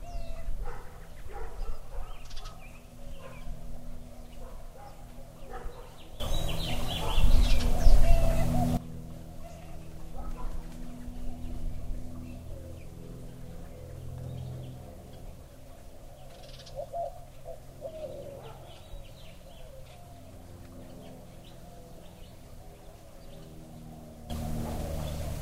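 A recording of sounds with two sudden gain jumps. At 6.2 s the level leaps up by about 15 dB, holding there until 8.77 s. At 24.3 s it jumps again, by about 12 dB, and stays raised to the end. The sound and the background noise rise together in a single step, with no fade. The likely cause is a digital gain setting applied instantly, without a ramp.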